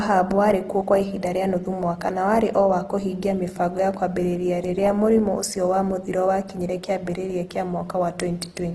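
From start to finish the speech sounds rough and grainy, with a noisy, gritty texture and nothing above about 12.2 kHz. This is Opus compression, likely at a low rate that fits roughly 16 kbps in the music (CELT) mode. With too few bits, the encoder keeps each band's energy but fills much of it with folded copies of lower bands or with noise, so detail turns into grain instead of clean tone.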